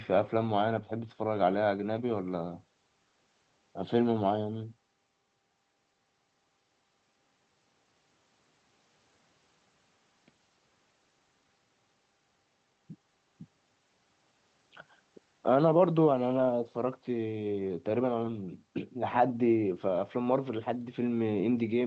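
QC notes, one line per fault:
Nothing to flag here; the speech comes over an ordinary call path with its top end stopping around 8 kHz, which fits a wideband Opus setting, and there are no faults to note anywhere in it.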